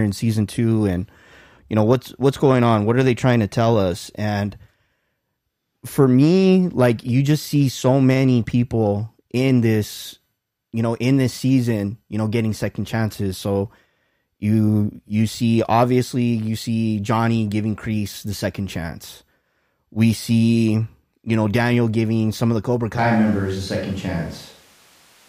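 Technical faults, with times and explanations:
22.98 s to the end: switch to a distant microphone. The voice abruptly turns roomy and hollow, with thinner bass, at much the same level, and room noise rises to roughly 30 dB below the speech, likely because a farther microphone replaced the close one.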